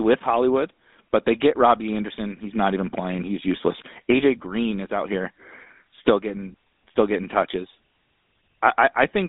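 From start to finish the speech carries GSM full-rate codec damage. The codec rebuilds the voice from a vocal-tract model fed by coarse, regularly spaced pulses. This gives a plainly buzzy, gravelly roughness. Nothing survives above 3.8 kHz. The band sits around 250 Hz to 3.7 kHz, which points to a phone link, with the codec running at 13 kbps.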